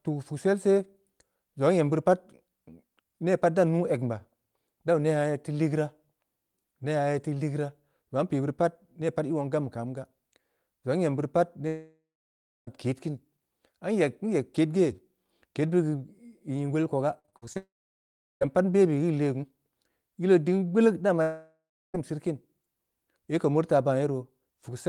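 At 11.67 to 12.69 s the speech breaks off for about a second: the last sound carries on briefly as a fading buzz, then roughly 0.65 s of near-silence follows before speech resumes with that stretch lost. This is a long network dropout, likely a run of packets that never arrived, concealed and then muted.

From 17.19 to 17.57 s repeated packet loss gives a choppy, robotic texture. Six short holes, the longest 51 ms, are each patched by extending the preceding sound, so about half of this span is synthetic fill.

That passage runs straight into a second long network dropout at 17.57 to 18.46 s, where 0.84 s of audio is missing and about 0.73 s of it is near-silent after a brief fading tail. A third, at 21.22 to 21.96 s, loses 0.72 s with a longer concealment buzz and about 0.35 s of quiet. Both are likely the same kind of sustained packet loss.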